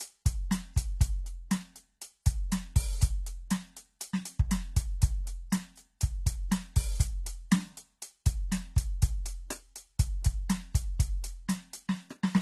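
Throughout the music, nothing sounds above 12.3 kHz. The artefacts of two different codecs are heard together rather than the single consistent signature of one low-bitrate encode. This points to transcoding between lossy codecs, likely a very low-rate HE-AAC encode later re-encoded as AAC-LC.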